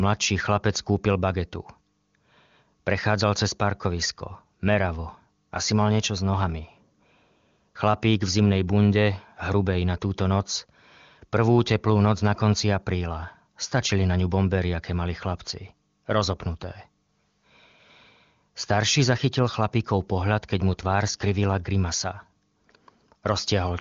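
Nothing stood out on listening to the speech, which came through the AMR wideband (HD Voice) codec.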